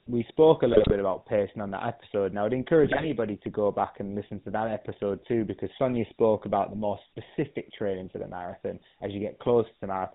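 The speech in this clip was coded with the GSM full-rate codec, which models the vocal tract and drives it with a sparse, regularly spaced pulse excitation. The damage is plainly audible throughout. Nothing above 4 kHz survives, so the sound is dull and band-limited, with the buzzy, gravelly roughness typical of a 13 kbps GSM full-rate call. There are also GSM bit errors on the link at 0.72 to 0.93 s and again at 2.84 to 3.07 s, where corrupted bits reached the decoder. Errors in the filter, pitch or gain parameters distort the spectrum and throw the level around from frame to frame, so in each of those stretches the speech briefly breaks into squawks, pops and gargling.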